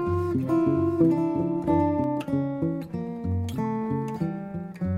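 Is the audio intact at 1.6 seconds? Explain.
No. A doubled audio track runs from the start to 2.04 s: a dry copy trails about 0.7 s late, roughly 5 dB quieter, likely from a second capture path.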